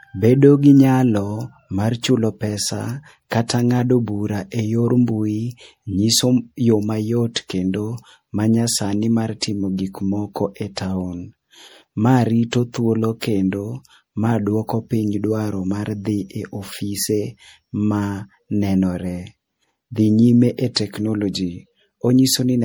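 From start to finish the speech has a swirly, hollow quality with smeared consonant attacks, worse than a single MP3 pass at 64 kbit/s would give. This is likely generation loss from re-encoding about three times, each pass adding fresh quantisation noise and spectral holes.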